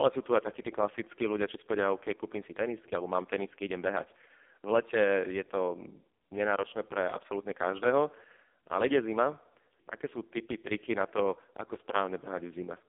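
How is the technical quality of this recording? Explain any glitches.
The quality is poor throughout: the recording has passed through an AMR narrowband mobile codec, heavily damaged from start to finish. Nothing survives above 3.5 kHz, and the band runs from about 250 Hz to 3.5 kHz. The speech is rebuilt from a vocal-tract model excited by a few pulses per short subframe. The harsh, buzzy, synthetic texture points to the codec's lowest mode, around 4.75 kbps. A simple telephone band filter would sound just as narrow, but the voice would stay natural rather than buzzy.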